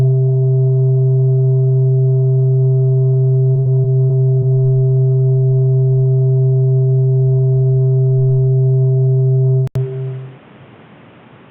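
From 3.51 to 4.44 s there is repeated packet loss, heard as a choppy, robotic stretch. Five holes open in quick succession, the longest 60 ms, totalling about 180 ms of missing audio. Each is patched by stretching the preceding sound, so roughly a fifth of the span is concealment. On a spectrogram this shows as short smeared or frozen bands, and the waveform shows brief repeated, overly regular segments.

At 9.67 s the sound drops out for 80 ms, then returns duller and narrower until the end. The likely cause is the input switching to a poorer device. Nothing remains above 3.8 kHz, the level shifts by around 5 dB, and a new noise floor sits roughly 35 dB below the signal. A spectrogram shows a thin vertical gap followed by a sharp ceiling at 3.8 kHz. The waveform shows a short flat stretch and then a changed envelope.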